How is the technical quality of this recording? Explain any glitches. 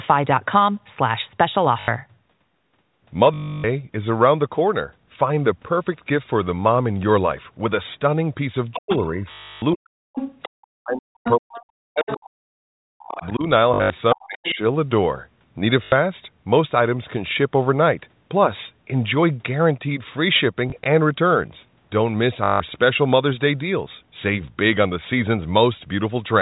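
The recording has three recurring call-path faults: packet loss with the last packet repeated, the other side's voice leaking through, and speech suppressed during double talk. All of it sits inside the narrow, telephone-band sound of G.711 coding.

Packet loss with the last packet repeated occurs at 1.8 s (80 ms), 3.34 to 3.64 s (300 ms), 9.32 to 9.62 s (300 ms), 13.74 to 13.9 s (140 ms, scattered, longest run 80 ms), 15.84 s (80 ms), 20.7 to 20.86 s (40 ms in scattered fragments) and 22.44 to 22.6 s (160 ms). The receiver replays the last good packet until fresh data arrives. The loop ignores pitch, so the replayed packets seldom join smoothly. The longer runs buzz at roughly 50 Hz, which fits 20 ms packets, and sound like a mechanical stutter.

The other side's voice leaking through appears at 8.73 to 9.07 s, 10.15 to 10.67 s, 11.23 to 12.17 s, 12.99 to 13.29 s and 14.13 to 14.55 s. 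It sits about 10 to 15 dB below the main speech. A second voice comes through. The likely cause is the far end's loudspeaker reaching the talker's microphone, with the echo canceller failing to remove it completely.

Speech suppressed in double talk overlaps those leaks: 8.77 to 9.18 s, 9.73 to 13.46 s (about 3 seconds affected in total) and 14.14 to 14.6 s. The main speech dips sharply, by roughly 40 dB at its deepest. This likely happens because the echo canceller, unable to separate the local talker from the loudspeaker echo while both are active, attenuates everything.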